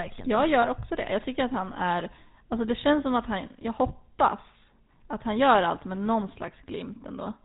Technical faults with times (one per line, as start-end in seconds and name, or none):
0.00-7.45 GSM full-rate codec